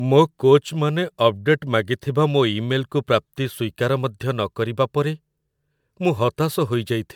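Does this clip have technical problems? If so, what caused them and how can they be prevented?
Yes. The speech has generation loss throughout. It sounds swirly, smeared and hollow, and consonant attacks blur. The likely cause is repeated lossy encoding, about four passes, consistent with MP3 at 128 kbit/s. Each pass requantises and adds damage. Prevent it by editing from a lossless master and encoding only once.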